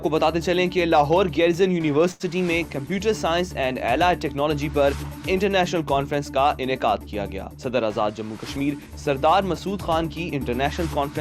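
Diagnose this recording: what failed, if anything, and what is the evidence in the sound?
Both failures sit at the network and jitter buffer stage. The first is a short stall from a late packet, at 2.11 to 2.23 s. A packet missed its playout time and the buffer ran dry. The receiver stretched the last sound to cover about 85 ms, then resumed exactly where it stopped. Nothing is lost. A sound is simply held too long, with a faint buzz or dip. Playout now runs 85 ms later than before.

The second is a jitter buffer speed-up, from 8.01 to 9.10 s. The buffer held more audio than its target. To shrink the delay, the receiver cut out short pitch-period-length pieces again and again. Across this stretch it trims about a tenth of a second. Playback runs at 107% speed with the pitch unchanged. The sound comes across as hurried and any steady rhythm slips forward.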